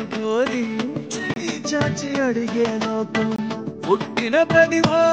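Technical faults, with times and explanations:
1.34–1.36 s and 3.36–3.38 s, gap between chunks: The sound stops dead for about 23 ms, then resumes. The audio was delivered in 2-second chunks with silence inserted at each join. Nothing is lost, but the hard-edged holes break the flow.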